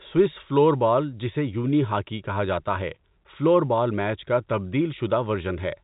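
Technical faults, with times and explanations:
No technical faults detected.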